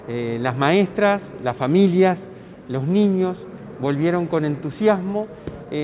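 No technical faults can be heard anywhere in this recording.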